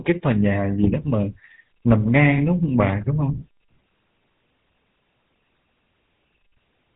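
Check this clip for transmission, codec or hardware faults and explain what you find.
One fault runs through the whole clip: the speech has a buzzy, gravelly roughness from start to finish, with nothing heard above about 3.9 kHz, so it sounds dull and boxed-in. This is the GSM full-rate codec, and the damage is plainly audible. The codec replaces the real vocal excitation with a sparse, regularly spaced pulse train shaped by a vocal-tract filter, which produces the grit. The band limit and coarseness fit its 13 kbps rate.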